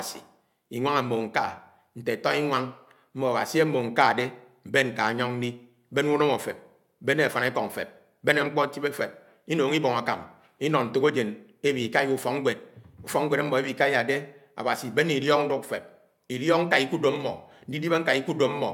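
No technical faults are audible anywhere in the recording.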